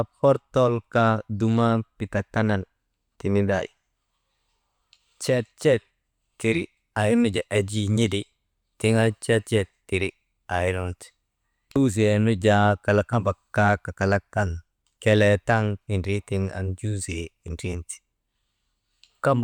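No technical faults can be heard at any point in the recording.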